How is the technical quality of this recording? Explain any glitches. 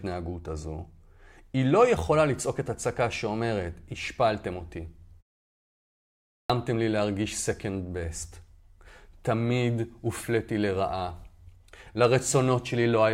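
There is one glitch, a clipped start after a pause, at 6.03 s. After about 0.89 s of silence, the output path seems to have gone idle and needed time to wake and lock again. The first 0.47 s of sound, up to 6.50 s, is swallowed, so speech resumes abruptly, missing its opening sounds.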